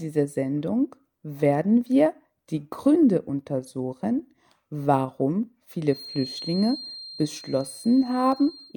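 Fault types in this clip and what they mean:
Feedback whistle: A thin, single-pitch tone sits behind the sound from 5.81 s until the clip ends at 8.77 s. It is pitched at 4.2 kHz and stays about 20 dB below the main signal. It swells and fades slowly but does not run away. The likely cause is a loudspeaker-to-microphone loop held just at the edge of feedback. At that edge, one high frequency keeps recirculating and ringing on. It is heard as a faint whistle rather than a howl.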